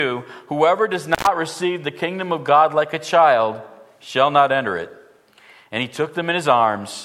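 Intermittent contact appears from 1.13 to 1.27 s: a loose cable or plug briefly loses its connection, so the sound drops out for about 103 ms, with crackle as the contact breaks and remakes, and faint hiss in the gap.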